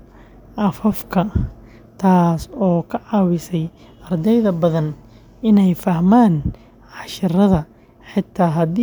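A brief click or buzz at 0.92 s in the speech is a repeated buffer: a tiny slice of about 1.3 ms replays several times, fitting a 64-sample buffer, with nothing lost.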